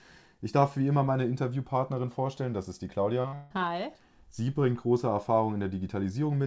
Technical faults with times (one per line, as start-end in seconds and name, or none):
3.22-3.34 short concealed packet loss
3.34-3.52 long network dropout